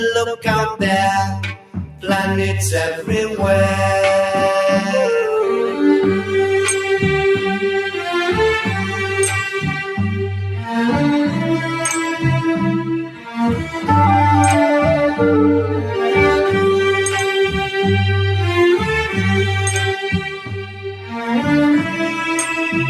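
A noise suppressor built for speech runs on this material throughout. It treats steady sound and decay as noise. Attacks pass, but held sound and tails sink by roughly 5 dB. The level pumps and the sound thins.

Five times, the suppressor cuts the sound harder than the rest. From 1.53 to 2.04 s, the level sinks by about 11 dB. At 9.83 to 9.99 s, it dips about 6 dB. It drops about 10 dB at 13.05 to 13.38 s and about 7 dB at 13.64 to 13.81 s. From 20.21 to 21.14 s, it falls about 11 dB. Each time, sustained sound fades and decays end early.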